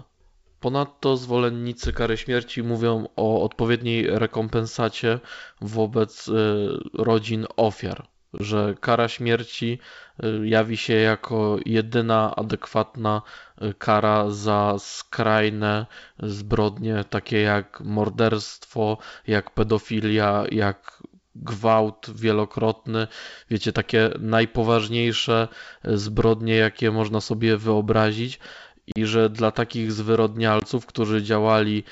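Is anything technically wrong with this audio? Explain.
Yes. The speech suffers packet loss on an ADPCM call. Short gaps fall at 8.38–8.41 s, between "rodzin ofiar" and "kara śmierci e jawi", at 28.92–28.98 s, after "jakie można sobie wyobrazić", and at 30.60–30.64 s. The lost audio comes to about 20, 40 and 20 ms. That fits roughly one, two and one packets. Each gap is replaced by silence with hard edges. The decoder's predictor and step size then drift from the sender's. So the sound resumes slightly distorted, then settles. The clear wideband G.722 sound is heard around these holes.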